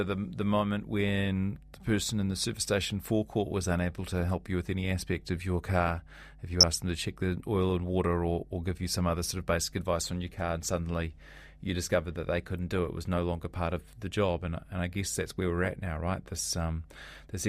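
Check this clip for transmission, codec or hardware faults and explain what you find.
Two faults are present: a continuous hum and one brief burst of digital corruption.

Mains hum runs through the whole clip. A ground loop or nearby transformer is leaking the 50 Hz power line into the signal path, leaving a steady low drone with some low harmonics, sitting roughly 25 dB below the speech level.

DAB burbling appears from 6.60 to 6.63 s, just before "asked them to check". Under weak reception, a small fraction of bit errors slipped past error correction into the MP2 data, corrupting sub-band samples. The result is a quick blip of noise in single sub-bands over the speech.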